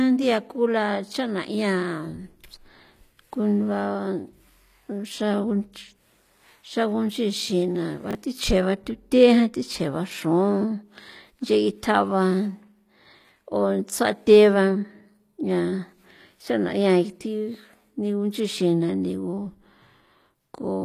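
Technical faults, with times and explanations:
throughout HE-AAC compression: s sounds are gritty and metallic, the treble is bright but synthetic, and there is nothing above 14.9 kHz, likely from band replication at around 24 kbps.
8.11 to 8.15 s chunks out of order: a 21.33 ms chunk plays one slot late, causing a jumbled blip with three hard joins; unlike a dropout, no audio is missing.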